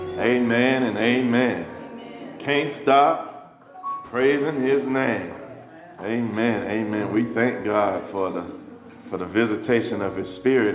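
Nothing here stands out as a fault; the sound comes over an ordinary call path whose G.711 mu-law coding at 64 kbps leaves nothing above 4 kHz, which is just how that codec is meant to sound.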